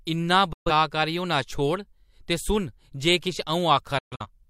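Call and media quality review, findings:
Digital broadcast dropout at 0.53–0.71 s in speech. Audio fades out over about 8 ms, silent for about 128 ms. Receiver muting after lost or checksum-failed frames; gap size fits roughly three frames. Content in the gap is gone.

Second digital broadcast dropout at 3.98–4.30 s, just after "जे किश". Two short holes spread over about 299 ms, longest 128 ms, about 171 ms missing in total. Same 8 ms mute fade. Intermittent frame loss at the receiver.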